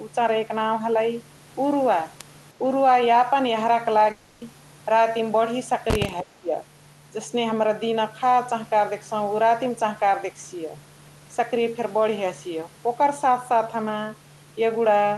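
At 4.11 s the speech breaks off and, for 0.3 s until 4.43 s, is replaced by a synthetic continuation of the last sound: a buzzy, fading tone that never reaches silence before real speech resumes without the lost 0.3 s. This is most likely a long network dropout concealed by the receiver. On a spectrogram the harmonics go flat and smeared, repeating without formant movement, then cut abruptly back to normal speech. The waveform shows a regular, decaying periodic stretch.

From 6.22 to 6.52 s the talker's level sinks by around 15 dB for about 0.3 s and comes back, sounding pushed away. It fits speech suppressed in double talk, likely an echo canceller ducking the near talker while the far side was active. On a spectrogram the whole band dims below the roughly 12 kHz ceiling. On the waveform it appears as a clear notch in the envelope. That 12 kHz ceiling fits an Opus call path.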